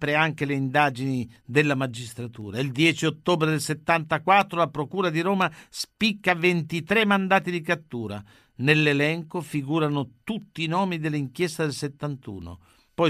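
Periodic USB or driver dropouts from 0.42 to 12.92 s: every 0.5 s a tiny sliver of speech drops to silence, around thirty regular ticks.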